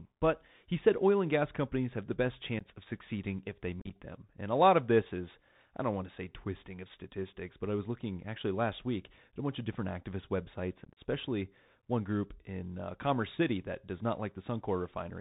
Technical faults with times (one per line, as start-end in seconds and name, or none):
0.00-15.21 Bluetooth CVSD headset codec
2.59-2.64 unconcealed Bluetooth headset packet loss
3.80-3.91 unconcealed Bluetooth headset packet loss
10.85-10.97 unconcealed Bluetooth headset packet loss